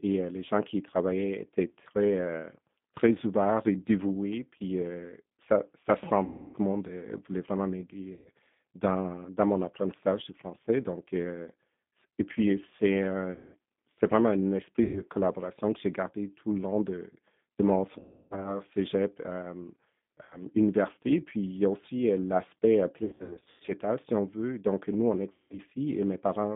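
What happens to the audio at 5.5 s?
At 5.5 s the speech carries G.729 codec damage, which runs through the whole recording rather than starting there. The coder rebuilds each 10 ms frame from a vocal tract filter, a pitch predictor and a few pulses, and the plainly rough, slightly synthetic texture fits an 8 kbit/s G.729A stream. On a spectrogram, energy stops at a hard ceiling near 3.6 kHz and thins below 150 Hz, with smeared, blocky harmonics.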